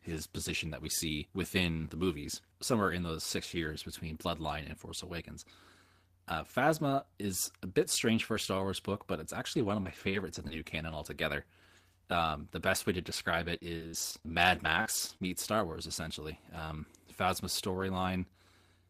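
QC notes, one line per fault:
9.55 to 10.51 s and 13.59 to 15.29 s, repeated packet loss (robotic sound): in each stretch, short pieces of the audio go missing one after another. There are roughly 80 ms lost in the first stretch and 240 ms in the second, with the longest holes at 42 ms and 60 ms. Each hole is filled by stretching the preceding sound, so the gaps come out as choppy sound rather than silence. This clustering of many patched holes sets it apart from a single dropout.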